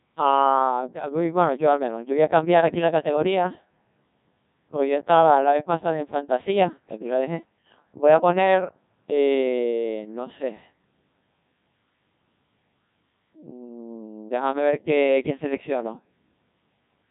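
Throughout, the speech carries Codec 2 vocoder damage. Only pitch, voicing, energy and spectral shape survive, resynthesised from sine waves. It sounds heavily robotic and buzzy, which fits a rate near 1.6 kbit/s.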